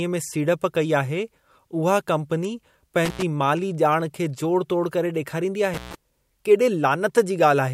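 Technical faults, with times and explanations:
3.05–3.22 s and 5.74–5.95 s, intermittent contact: a loose connection in the speech path briefly opens, dropping the signal for about 86 ms and then 137 ms. Crackle marks each edge, with faint hiss during the break. The waveform shows flat near-silent gaps; the spectrogram shows broadband vertical click lines around dark stretches.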